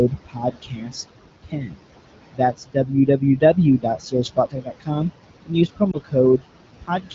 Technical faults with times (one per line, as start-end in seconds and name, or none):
0.00-7.15 noise suppressor artifacts
0.10-1.10 speech cut by the noise suppressor
1.43-1.79 speech cut by the noise suppressor
2.33-4.90 speech cut by the noise suppressor
5.46-6.15 speech cut by the noise suppressor
5.91-5.97 lost AMR speech frames
6.81-7.15 speech cut by the noise suppressor